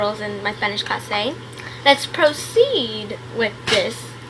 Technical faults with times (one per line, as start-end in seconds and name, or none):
none